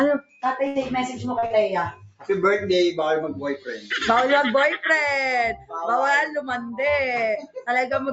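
A noise suppressor applied to music or sounds stays active throughout, mistaking steady tones and tails for noise, so the level pumps by around 5 dB and held sound thins.

Sound cut by the noise suppressor first occurs at 0.19 to 0.43 s, where the sound sinks by about 19 dB because the suppressor treated it as noise. The same cut recurs at 1.94 to 2.29 s (about 19 dB), 3.58 to 3.91 s (about 12 dB), 5.57 to 5.73 s (about 15 dB) and 7.42 to 7.64 s (about 20 dB).

A burst of packet loss at 0.67 to 0.78 s removes 80 ms. The receiver fills 76 ms by continuing the last sound as a fading hiss or buzz, then resumes with that stretch missing.

Short concealed packet loss at 1.39 to 1.45 s and again at 1.46 to 1.53 s drops about 40 ms each time. The receiver extrapolates across each gap, leaving a quick smear or wobble. Throughout, the call path's 8 kHz bandwidth limit dulls the top end.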